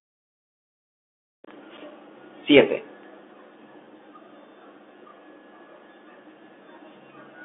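Throughout the speech, the Bluetooth CVSD headset codec squeezes the sound into roughly 250 Hz to 3.5 kHz, with nothing above 3.8 kHz. Its one-bit up-or-down steps can't keep pace with loud, bright sounds, so s sounds turn scratchy over a granular hiss. A clean band-limiting filter would leave neither.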